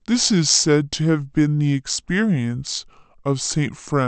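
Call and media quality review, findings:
Speech slow and low throughout, pitch down about 5.5 semitones, tempo at 0.726x. Wrong sample rate at playback: no resampling, fits 44.1 kHz audio played at 32 kHz, so pitch and speed drop together.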